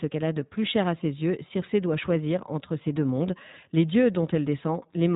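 iLBC codec damage runs throughout, with nothing above 3.8 kHz and plainly rough, synthetic speech from coding each short frame independently, which fits the 15.2 kbps, 20 ms mode.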